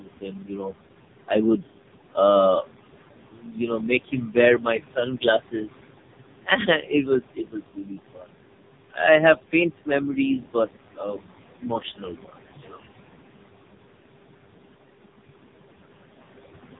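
From start to end the speech passes through the AMR narrowband mobile codec. Nothing survives above 3.8 kHz, and the voice turns buzzy and synthetic, with the heavy damage of a bitrate near the bottom of AMR-NB's range, around 5 kbps. Plain band-limiting would dull the sound without adding that pulse-driven buzz.

Noise suppressor artifacts also run throughout. The room noise, which sits about 11 dB under the speech, is pulled down by about 21 dB between phrases and comes back under them. This pumping background separates it from the steady swirl the codec puts into noise.

The noise suppressor cuts speech from 0.00 to 0.75 s, turning it down by up to about 22 dB for roughly 0.7 s. Again from 6.44 to 8.32 s, about a second in total is dropped by up to about 21 dB. In both places the sound goes faint and swallowed rather than breaking off outright, which sets it apart from a dropout.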